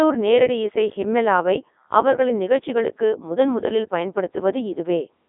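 Speech throughout shows heavy Codec 2 vocoder damage: resynthesised from sine waves, it sounds robotic and buzzy, band-limited to 250 Hz–3.6 kHz with nothing above 3.8 kHz, which fits a 3.2 kbit/s mode.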